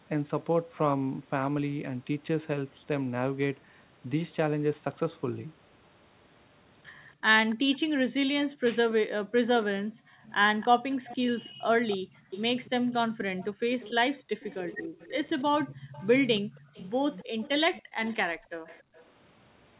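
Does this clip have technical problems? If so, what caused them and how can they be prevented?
Yes, there are a few echo canceller problems here.

Echo leak: a faint delayed copy of the speech trails the talker by about 283 ms, first briefly from 7.5 to 7.78 s at roughly 25 dB down, then from 10.27 to 19.03 s at about 20 dB down. It's likely coming from the far end's loudspeaker being picked up by their microphone and sent back because their canceller didn't fully remove it. Better speaker-to-mic separation, a headset, or a canceller that adapts properly to that delay would stop it.

Background gated by the echo canceller: the room sound gets pulled down hard, around 40 dB at the deepest, while the loudspeaker is playing. That happens from 8.49 to 10.27 s (about a second of actual dipping), from 11.49 to 12.3 s (about half a second), briefly from 13.51 to 13.68 s, and from 15.75 to 18.94 s (about a second in total). 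The room tone drops out and comes back once the suppressor lets go. A gentler suppressor setting, or comfort noise to fill the gaps, would keep the background steady.

Speech suppressed in double talk: from 14.27 to 14.35 s the talker's voice briefly cuts out very deeply, for about 70 ms of that short window. Both sides are talking at once there, so it's likely the canceller couldn't tell the near talker from the echo and clamped down on both. A canceller with better double-talk detection, or less aggressive suppression during overlap, would keep the voice through.

The dull, narrow sound you'll notice throughout, with nothing above 4 kHz, fits a G.711 narrowband call path.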